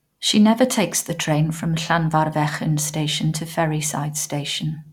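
No technical faults are audible in this speech.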